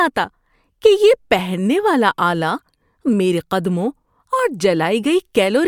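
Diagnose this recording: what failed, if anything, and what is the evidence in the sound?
Nothing failed in this recording, and there is no evidence in the sound of any fault.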